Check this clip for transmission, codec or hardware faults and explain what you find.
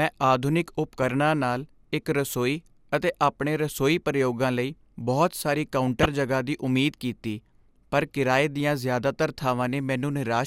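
Two brief faults are present, both DAB burbling in the speech. At 6.02 to 6.06 s, after "ਪ੍ਰਯੋਗਾਂ ਲਈ ਬਹੁਤ ਸਾਰੀ", and at 9.11 to 9.16 s, after "ਕੀਤੀ ਪਰ ਕਿਰਾਏ ਦੀਆਂ", residual bit errors get into the MP2 audio data across a handful of frames. Wrong samples put short blips of noise into single sub-bands. On a spectrogram this shows as isolated bright rectangular band blocks.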